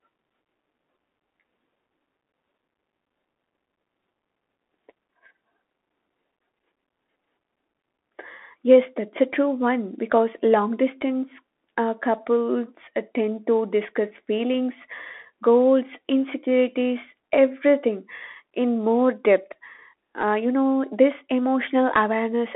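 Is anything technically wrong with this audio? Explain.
Yes. Throughout the speech the sound is thin and boxed in, with a granular hiss beneath it, scratchy s sounds, and roughness on loud, bright syllables. This is the Bluetooth CVSD headset codec. It encodes each sample as a single up-or-down bit with an adapting step size, which fits a 64 kbps link. Fast, loud high content outruns the step and distorts. The band sits at roughly 250 Hz to 3.4 kHz, and nothing above 3.8 kHz survives.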